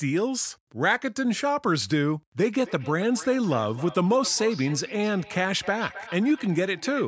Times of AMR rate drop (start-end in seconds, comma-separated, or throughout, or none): none